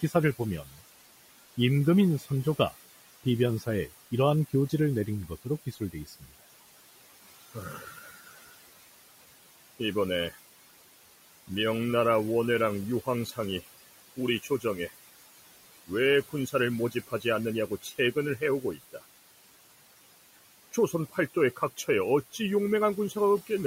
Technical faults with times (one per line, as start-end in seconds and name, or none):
0.00-23.66 noise suppressor artifacts
0.01-6.32 speech cut by the noise suppressor
7.54-8.28 speech cut by the noise suppressor
13.05-14.91 speech cut by the noise suppressor
15.87-19.03 speech cut by the noise suppressor
20.73-23.50 speech cut by the noise suppressor